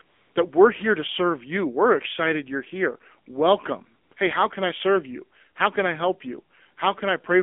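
Throughout, the speech carries AMR narrowband mobile codec damage. Audio is confined to roughly 250 Hz to 3.5 kHz, and a vocal-tract model driven by sparse pulses renders the voice plainly buzzy and synthetic. That degree of damage points to a low mode around 7.4 kbps.

From 0.02 to 0.36 s, just before "that we're here to", AMR comfort noise fills 340 ms where no speech frames were sent. The receiver substitutes a smooth, steady synthetic hiss for the real background. Brief recurrences at 4.04 to 4.12 s and 4.14 to 4.16 s switch in and out.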